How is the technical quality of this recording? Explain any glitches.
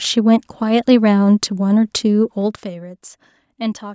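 The recording has one audible glitch, zipper noise during a level drop. From 2.37 to 2.79 s the level falls by roughly 15 dB in unsmoothed 2 dB steps, about twenty per second. Each abrupt step adds a small click, so a fast ticking, zipping texture rides on the speech while the level moves.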